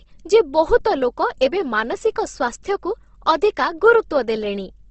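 From start to finish the speech carries what is likely Opus compression, run at a low rate in its music-style mode. Nothing is present above 8.1 kHz, a wideband limit consistent with a bitrate around 16 kbps. Rather than leaving gaps, the encoder fills starved bands with folded or noise-like content, so voiced sounds come across rough and grainy, with a plainly audible hiss-like texture over the harmonics.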